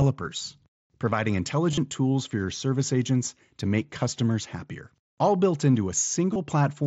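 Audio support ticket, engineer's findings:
Concealed Bluetooth headset packet loss, mSBC link. Brief, near-hidden patches at 0.36 s and 3.27 s, each about one 7.5 ms frame. Buzzy held tone at 1.71–1.78 s and 6.33–6.36 s, with warble on recovery. Receiver repeats recent waveform over gaps.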